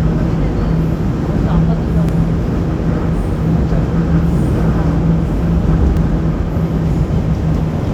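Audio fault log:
2.09 s and 5.97 s, block of digital silence: the signal drops straight to zero for about 1.45 ms at 2.09 s and about 2.9 ms at 5.97 s, which fits blocks of 64 and 128 samples left unfilled when the output buffer was not written in time. There is no fade into or out of either gap, so each abrupt step to zero and back is heard as a sharp tick rather than a hole.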